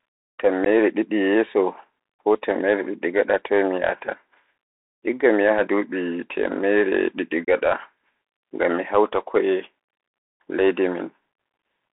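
Throughout, the Bluetooth CVSD headset codec confines the speech to roughly 300 Hz–3.6 kHz, consistent with a 64 kbps CVSD link, leaving scratchy sibilants and granular hiss.

Unconcealed Bluetooth headset packet loss cuts abrupt holes at 0.65–0.67 s and 7.45–7.48 s, about 15 and 22.5 ms of lost audio, several packets each.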